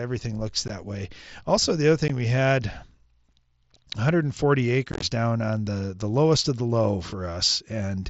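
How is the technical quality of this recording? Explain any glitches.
The recording has audible dropouts from unconcealed Bluetooth headset packet loss, carried over a wideband mSBC headset link whose speech band reaches up to 8 kHz.

At 0.68 s and 2.08 s, brief holes of about 15 ms cut the speech with hard, abrupt edges. Between 4.92 and 5.02 s, a cluster of gaps spread over about 105 ms, the longest about 23 ms, makes the speech sound chopped and crackly. Each time, voice packets between headset and phone went missing, and nothing filled the gaps.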